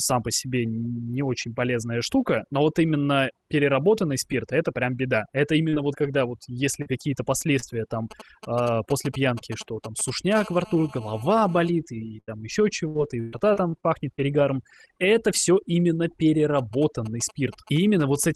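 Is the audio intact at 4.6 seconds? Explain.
No. At 4.6 seconds the background drops and breaks up into small twinkling specks. This is overdone noise removal, present across the whole clip rather than at that moment alone. The reduction was set too hard, so individual frequency bands near its noise estimate are pulled far down or shut off, taking quiet parts of the speech with them and leaving isolated flickers behind.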